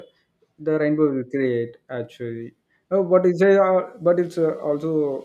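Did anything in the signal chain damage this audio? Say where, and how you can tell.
No, nothing in the signal chain has audibly damaged this speech recording, and its level, continuity and timing hold steady throughout.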